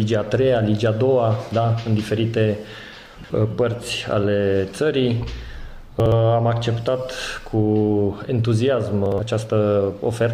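The audio has chunks out of order at 3.06 to 3.3 s, 6.0 to 6.12 s and 9.06 to 9.18 s. A 60 ms chunk plays three chunks late, then one chunk late twice, giving a garbled, jumbled moment each time. Unlike a dropout, nothing is missing or silent.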